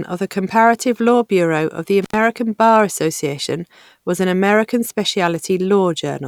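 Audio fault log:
2.02–2.16 s, intermittent contact: just after "of the", the speech drops out for about 88 ms, with a crackle at the start and end of the gap and faint hiss in between. A loose plug or cable momentarily lost its connection. The brief open circuit cut the signal off, and the contact surfaces scraping as they parted and met again caused the crackle at each edge.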